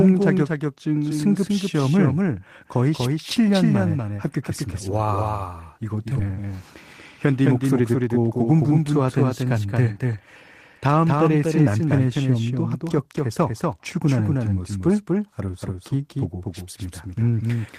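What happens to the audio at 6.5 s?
From 6.29 to 6.53 s there is a jitter buffer speed-up. Overfilled buffering forced the receiver to cut short pitch-period pieces. About 40 ms goes, so speech runs 113% fast, hurried but unchanged in pitch. A doubled audio track also runs throughout: a second copy trails by about 200 ms, about 5 dB quieter and dry, likely from a second, slower capture path.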